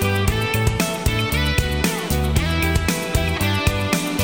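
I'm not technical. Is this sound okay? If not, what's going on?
Yes, the sound is technically fine, with no glitches, dropouts or other problems in the signal at any point.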